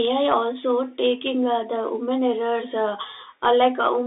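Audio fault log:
Throughout: Bluetooth CVSD headset codec. The speech sits in a narrow telephone band of roughly 250 Hz to 3.7 kHz, with nothing above 3.8 kHz, so it sounds thin and boxed-in. The coder sends one up-or-down bit per sample and adapts its step size. On loud, fast-rising sounds the step cannot keep pace and the signal distorts. Sibilants come through scratchy, and a granular hiss sits under the speech. The damage is plainly audible, consistent with a 64 kbps CVSD link.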